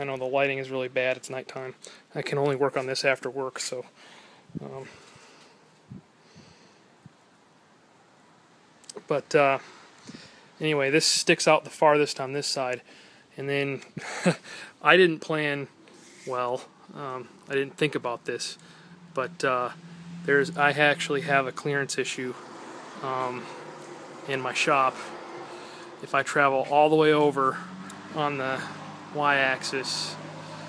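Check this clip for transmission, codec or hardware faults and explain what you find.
No faults can be heard.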